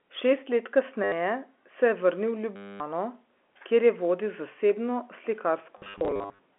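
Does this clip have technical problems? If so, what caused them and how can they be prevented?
Yes. Packet loss with last packet repeated occurs at 1.04–1.12 s, just before "se je vrnil", at 2.56–2.8 s, and in short bursts across 5.78–6.39 s. Replaying the last packet causes a robotic buzz near 100 Hz, which fits 10 ms packets. A spectrogram shows evenly spaced vertical stripes, and the waveform shows one short block copied again and again. A more reliable network path plus proper loss concealment would prevent it.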